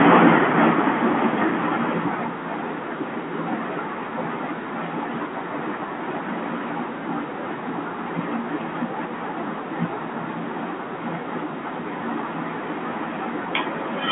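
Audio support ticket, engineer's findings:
Automatic gain falling, 0.05 to 2.62 s. Opens loud, then level sinks about 15 dB, background sinking with it. Probable component: send-path AGC judged input too hot and pulled gain down gradually. G.711 telephone band audible throughout, nothing above 3.4 kHz.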